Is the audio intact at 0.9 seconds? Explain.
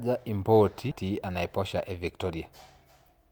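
No. A skip ahead occurs at 0.91 to 0.93 s: roughly 0.7 s of speech was discarded, either lost in transit or dropped by an overflowing jitter buffer while later audio was already queued, so playback jumps straight to that later material. Nothing fills the join, leaving no pause, and the two sides of the cut butt together almost directly. The speech lurches forward abruptly, with part of what should have been heard simply gone.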